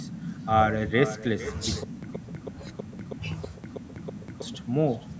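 From the start of the speech, every phrase is trailed about half a second later by a quieter, thinner copy, about 14 dB below the original. This is echo with no canceller: the far end's loudspeaker is feeding back into its microphone, and nothing removes that returning sound.

From 1.84 s to 4.42 s, the same 134 ms burst plays eight times, each followed by 189 ms of dead digital silence, repeating every 323 ms. This stutter with silent gaps likely comes from a stalling stream that replayed its last fragment at each retry and then ran dry. The audio meant for that stretch is lost.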